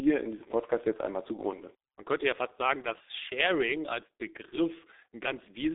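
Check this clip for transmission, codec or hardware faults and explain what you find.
One codec fault runs through the whole clip: G.723.1 coding, heavily damaged.

Across the full speech clip, the G.723.1 codec discards everything outside roughly 300 Hz to 3.7 kHz and rebuilds the voice from a slowly updated model at a very low rate, consistent with about 6.3 kbit/s. The voice sounds muffled and hoarse, with smeared consonants. On a spectrogram, energy stops flat at 3.8 kHz.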